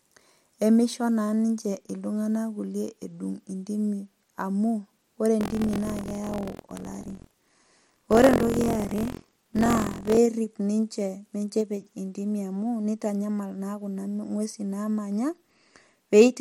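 From 5.39 to 10.18 s, after "edung intimi amu ore", buffer tearing adds a robotic 43.1 Hz rattle to the speech, fitting a 1024-sample buffer. Write and read positions have crossed, so about 15% of each period replays audio roughly 100 ms stale. The waveform shows hard joins; the spectrogram shows regular vertical stripes.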